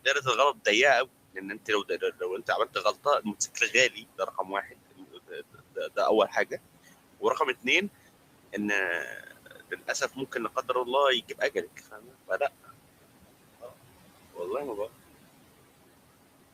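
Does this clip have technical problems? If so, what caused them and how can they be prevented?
Yes. There are two problems, and both come from the noise suppressor.

Noise suppressor artifacts run through the whole clip. The room noise sits about 18 dB below the speech. The suppressor pulls it down by about 17 dB. It works band by band and frame by frame. Any band it judges to be steady noise gets turned down. So the background sinks in the gaps between words. Then it comes back up under the speech. The noise floor pumps instead of staying even. To prevent this, use a gentler suppression setting so the floor stays steadier.

Speech cut by the noise suppressor happens in four stretches. Each time, the suppressor mistook parts of the speech for noise and turned them down. Soft consonants and word endings sound swallowed or faint.
From 0.05 to 0.66 s, drops reach about 12 dB, over about a tenth of a second in total.
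From 1.06 to 5.97 s, they reach about 18 dB, over roughly a second.
From 9.14 to 10.88 s, they reach about 15 dB, over a little under half a second.
From 11.27 to 12.71 s, they reach about 17 dB, over about half a second.
To prevent this, lower the suppression depth or improve the signal-to-noise ratio at the microphone, so quiet speech stands clear of the noise estimate.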